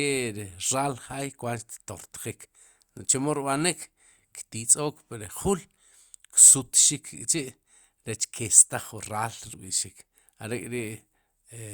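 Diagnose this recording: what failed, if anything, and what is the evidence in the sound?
The failure sits at the codec stage: a corrupt frame was decoded and played. Two short bursts break through the speech, at 3.81 to 3.84 s, just before "ktizook pri", and at 6.33 to 6.36 s, peaking at about -25 dBFS and -30 dBFS. Each lasts roughly 23 ms, which points to one damaged compressed frame per event. Flipped bits made the decoder misread gains or codes, so it placed energy at the wrong frequencies for that frame, heard as a brief chirp, squeak, blip or burst of noise.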